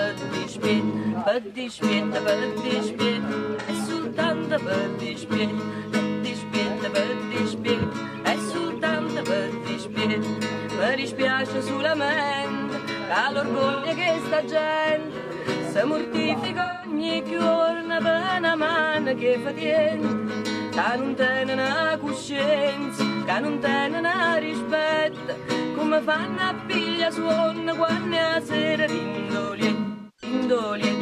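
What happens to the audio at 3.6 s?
AAC frame loss with concealment occurs from 3.59 to 3.70 s. Roughly 85 ms of coded audio goes missing, which fits two lost frames, and the decoder rebuilds the gap from the last good spectrum. The result is a brief smeared, noisy, phasey patch.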